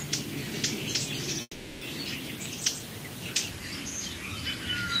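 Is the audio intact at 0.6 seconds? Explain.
Yes, the audio at 0.6 s is intact, with no dropout, click, distortion or other fault at that moment.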